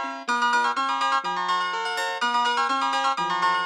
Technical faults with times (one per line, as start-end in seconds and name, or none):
0.00-3.66 wrong sample rate